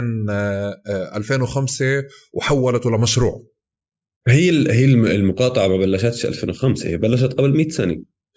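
No technical faults are audible.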